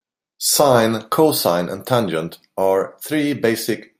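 No technical faults are audible.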